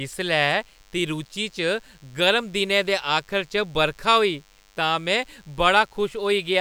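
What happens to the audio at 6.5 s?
At 6.5 s the speech carries a DECT cordless phone buzz, present for the whole clip. A nearby DECT handset or base sends radio bursts every 10 ms, which the audio circuit rectifies. The result is a thin, steady 100 Hz buzz full of harmonics, sitting faintly under the speech.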